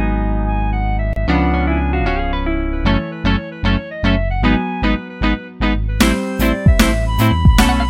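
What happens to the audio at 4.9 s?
Nothing goes wrong at 4.9 s; the audio plays through that moment intact, with no dropout, click or distortion.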